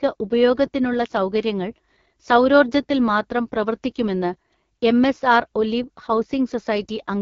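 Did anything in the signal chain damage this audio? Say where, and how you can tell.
Yes, at the codec stage: this speech has been through the AMR wideband (HD Voice) codec. It's rough and raspy for the whole clip, and nothing sits above 7.2 kHz. That rasp points to one of the lowest modes, likely around 8.85 kbit/s, too thin for a clean pulse model of the voice.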